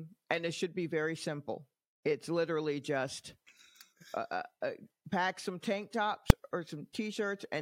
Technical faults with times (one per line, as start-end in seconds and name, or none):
6.30 invalid numbers at full scale